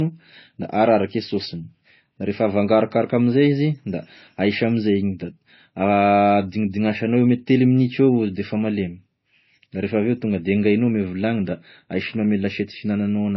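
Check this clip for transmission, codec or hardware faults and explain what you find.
One fault is present throughout. The speech sounds dull, with nothing above 5.8 kHz and two kinds of coding artefact layered together. The likely cause is transcoding between lossy codecs: a low-rate MP3 stage, then AAC-LC, each adding its own damage while keeping the lower cut-off.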